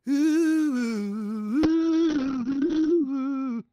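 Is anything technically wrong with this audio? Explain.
Yes. From 1.65 s to the end, there is a call bitrate drop. The bandwidth estimate fell, and the encoder went from 32 to 7 kbps, staying lowest for about 1.28 s. Coarser coding and a top end cut from 20 kHz to 6 kHz make the sound rough and muffled.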